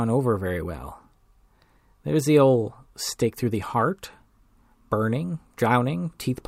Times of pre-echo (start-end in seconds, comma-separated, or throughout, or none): none